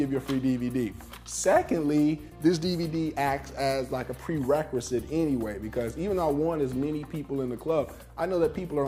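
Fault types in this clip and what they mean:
No technical faults can be heard in this clip.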